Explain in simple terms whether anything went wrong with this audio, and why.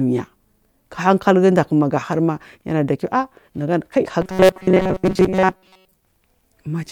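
From 4.22 to 5.96 s the speech turns into a rigid, metallic buzz at 188 Hz. This is robotic sound from repeated short buffers. New audio likely arrived too slowly, so a fragment of about 5 ms was replayed over and over, covering most of the real sound.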